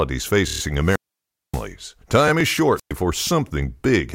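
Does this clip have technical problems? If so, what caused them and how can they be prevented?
Yes, there are three kinds of fault.

Repeated frames, 0.47 to 0.60 s: a short stretch of coded audio plays again several times, giving a stutter and adding about 133 ms to the clip. The repeat length fits a run of three compressed frames of about 17 ms each, written or sent more than once. Unlike a repeated playback buffer, the repeated unit follows the codec's frame size, and the audio is audibly stretched rather than just clicked. To prevent it, fix the muxing or streaming step that duplicates packets, and check for repeated timestamps before delivery.

Wireless microphone squelch dropout, 0.82 to 1.68 s and 2.75 to 2.93 s: each begins with a rise of hiss as the FM radio link weakens. The receiver's squelch then mutes the output, leaving a hole of near silence of about 580 ms in the first event and about 113 ms in the second, before the sound returns. 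The hiss leading into the silence separates this from a digital dropout, which cuts out cleanly. To prevent it, keep the transmitter in clear line of sight, use diversity receivers and well-placed antennas, and choose a clean frequency.

Repeated buffer, at 2.41 s: a single 5 ms block plays twice with a hard join, heard as a brief glitch, because the device ran out of fresh audio and replayed what it had. Essentially nothing is lost. Its tiny size sets it apart from the frame repeat earlier. To prevent it, use larger audio buffers and reduce CPU or driver load on the playback or recording device.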